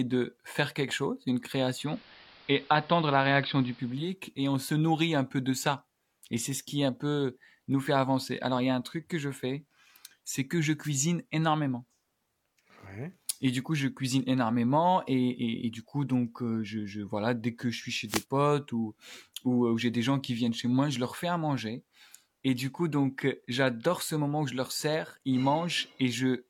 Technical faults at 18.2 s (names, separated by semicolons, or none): wireless microphone noise hit